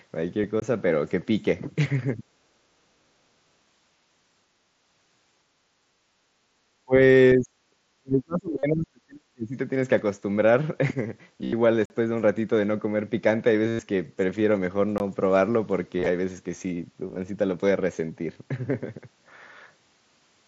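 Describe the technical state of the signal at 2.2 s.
From 2.17 to 2.23 s the speech dips by around 5 dB, likely speech suppressed in double talk, as echo control ducks the talker; the waveform narrows briefly.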